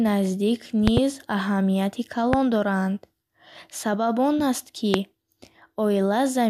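Loud pops strike three times: a double pop at 0.88–1.00 s, then single pops at 2.33–2.36 s and 4.94–4.97 s, each around 20 dB above the speech. They are likely voltage steps from switching or static. Each shows as a tall spike on the waveform and a bright, full-band vertical stripe on the spectrogram.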